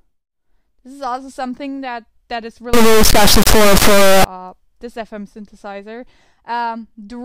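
From 2.74 s to 4.24 s there's a clear integer read as float fault. The sound points to 32-bit integer samples being interpreted as 32-bit floats, so the bit patterns turn into nonsense values, some almost zero and others wildly past full scale. The output slams between silence and the clipping ceiling, and you hear a harsh, very loud buzzing square wave for about one and a half seconds before the audio snaps back.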